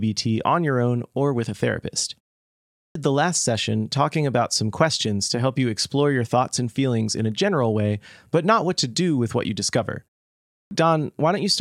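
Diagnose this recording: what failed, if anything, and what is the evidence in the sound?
The playback end is at fault here, with a clipped start after a pause. After "or with a therapist" there's a half-second gap, and then from 2.62 to 2.95 s about a third of a second is swallowed, so "the last session talking" comes in abruptly. The same thing happens after "with what you discover": a 0.37 s pause, then about 0.34 s gone at 10.37 to 10.71 s. The output device is dozing in the silence and needs that long to wake or re-lock before it passes sound again.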